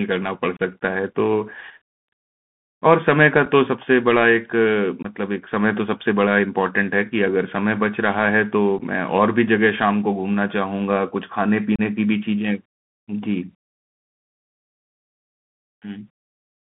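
Throughout the speech, a Bluetooth CVSD headset codec confines the sound to a band of about 150 Hz to 3.5 kHz, which fits a 64 kbps CVSD link. Its one-bit delta coding cannot track fast loud changes, so sibilants turn scratchy and a granular hiss sits underneath. A spectrogram shows an empty region above 3.5 kHz with a grainy noise floor.

Unconcealed Bluetooth headset packet loss cuts holes in the speech at 0.57–0.60 s, 3.45 s, 5.03–5.06 s, 8.79 s and 11.76–11.81 s. Each is a loss of a few packets, lasting from 7.5 ms to 30 ms, and is left as silence or an idle pattern. The holes have abrupt edges, and the speech returns quieter for a moment. The waveform shows sharp-edged flat gaps, and the spectrogram shows thin vertical blank strips.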